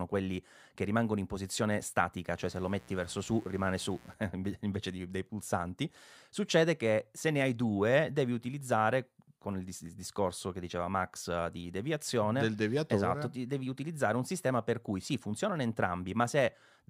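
Mains buzz runs from 2.39 to 4.14 s, just after "rimangono in posizione statica", sitting roughly 25 dB below the speech. Sharp switching spikes on a 60 Hz supply leak in twice per cycle, spraying harmonics up into the kilohertz range as a steady, raspy buzz.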